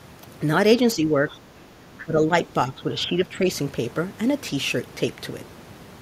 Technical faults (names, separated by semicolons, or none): speech suppressed in double talk; other side's voice leaking through